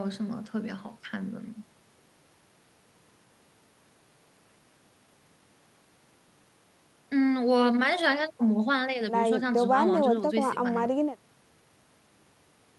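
Speech, with no technical faults to be heard.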